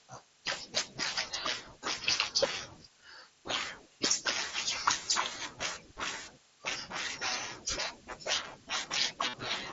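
At 9.29 s, running to 9.34 s, the speech breaks into a short buzz from concealed Bluetooth headset packet loss. About 45 ms of audio never reached the phone, which fits a run of roughly six lost packets, and the receiver filled the gap by repeating the closest-matching recent stretch of waveform. The result is a flat, steady tone held at full level, with a slight warble as real speech resumes. On a waveform the gap shows as a short, regular repeating cycle with no level dip. On a spectrogram it appears as evenly spaced harmonic bands with no change in pitch, cutting off near 8 kHz like the rest of the wideband headset audio around it.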